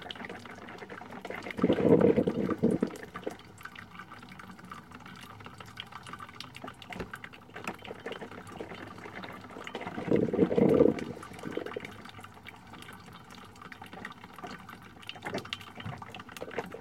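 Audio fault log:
No faults detected in this recording of sounds; nothing to log.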